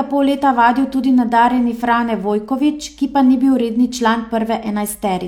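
Nothing in this speech recording stands out as a technical fault at any point, so there's really nothing to flag here.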